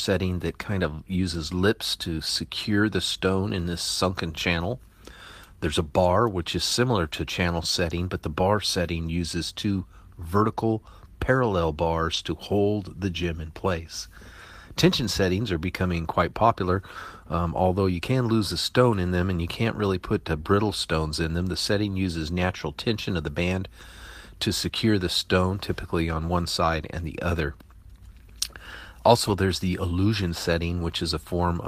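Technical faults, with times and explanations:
7.11, 12.13–12.19, 15.53, 23.81–23.83 and 29.27–29.33 s: lost packet rebuilt from error correction. Five times the speech briefly turns rough and a bit noisy without ever dropping out. The short spots are about 20 ms each, which fits a single lost packet, and the 40 ms ones at 12.13 and 29.27 s fit two in a row. Each time the next packet carried a low-bitrate backup copy, and the decoder played that instead of leaving a gap.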